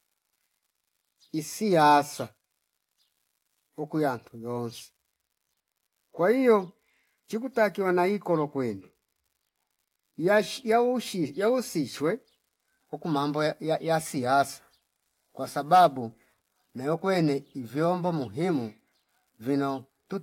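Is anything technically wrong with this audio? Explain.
Yes. An unreliable data bit runs through the whole speech recording. One data line is marginal, so its bit flips in a random share of samples, and each error adds a spike of the same size, about -51 dBFS. The result is a constant fine crackle or fizz that carries on through the pauses as well. A waveform shows scattered equal-height spikes even in silent stretches, and a spectrogram shows a broadband speckled noise floor across the full length.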